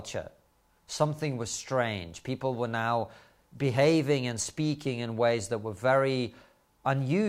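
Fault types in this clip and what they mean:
Nothing in this speech recording stood out as a technical problem on listening.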